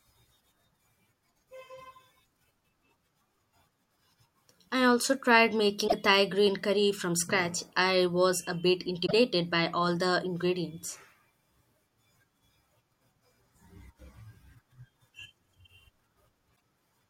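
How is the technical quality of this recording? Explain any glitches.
Three short glitches from damaged data in a compressed stream: 5.84–5.94 s after "I also tried", 9.03–9.13 s between "I was a bit" and "by all the ingredients", and 16.52–16.55 s. Each is a brief chirp, squawk, click or short hole. Corrupted bytes left the decoder unable to read those frames correctly, so it output garbage or dropped out of sync until it found the next valid frame header, replacing roughly 30 to 100 ms of speech.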